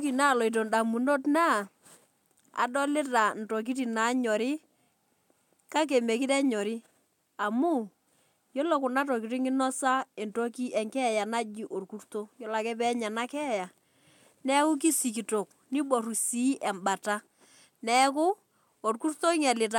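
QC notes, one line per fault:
No faults heard anywhere in the speech.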